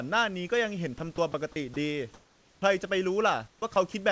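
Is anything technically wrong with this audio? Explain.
Yes. At 0.98, 1.16, 1.32, 1.74, 3.74 and 3.92 s, brief 20 ms bits of speech (10 ms at 1.16 s) are dropped by the voice detector and replaced by flat noise, likely comfort noise standing in for speech misjudged as background. They are gaps filled with hiss, not clicks or repeats. From 3.48 to 3.62 s, comfort noise replaces the background: the room's textured noise turns smooth and about 4 dB quieter, likely from discontinuous transmission, with no speech lost. The band stops at 8 kHz, as expected for the G.722 call path.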